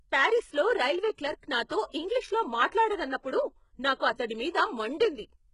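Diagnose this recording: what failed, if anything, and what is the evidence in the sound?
HE-AAC compression runs throughout the speech, and the codec stage is the likely culprit. Nothing reaches above 11 kHz, and the treble that remains sounds synthetic. The s sounds turn gritty and lispy, with a metallic sheen, because the upper band is rebuilt by spectral band replication from copied lower bands under a coarse envelope, so its harmonics do not line up with the real ones. The damage is heavy, which fits a very low bitrate around 12 kbps.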